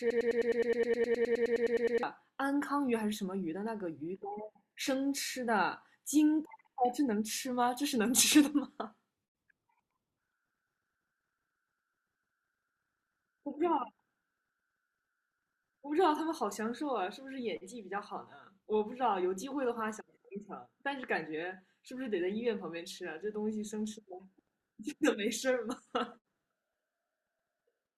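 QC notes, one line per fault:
0.00–2.03 s, broken-record loop: the speech opens already locked into a fragment about 0.10 s long (104 ms) that repeats exactly, back to back, 18 times before normal playback resumes at 2.03 s. The identical short cycle gives a stuttering, machine-gun buzz at roughly 10 repeats per second. This is likely a stalled player, encoder or stream resending the last fragment in its buffer, and the audio that belonged in those first two seconds is lost.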